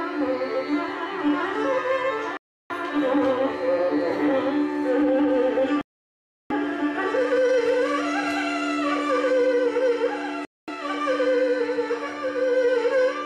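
Three dropouts break the audio, at 2.37 s, 5.81 s and 10.45 s. Each one cuts to dead silence and then picks back up: about 330 ms the first time, about 690 ms in the middle, and about 230 ms near the end. That on-off gap pattern points to a likely Bluetooth stall, where the headphones' buffer ran empty while delayed packets were being resent, so playback simply halted until data arrived again.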